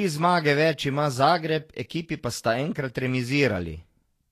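Throughout the speech, the treble is hissy and grainy, with blurred consonant attacks, likely from Vorbis compression at a low setting, consistent with around 36 kbps. Coarsely quantised high frequencies turn into noise, and a spectrogram shows a hard ceiling at 14.2 kHz with speckled texture below it.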